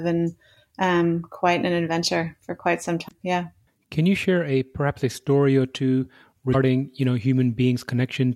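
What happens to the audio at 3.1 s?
A short glitch cuts into the speech from 3.05 to 3.12 s. This is damaged data in a compressed stream: corrupted bytes there make the decoder misread those frames and lose sync until it finds the next valid frame header.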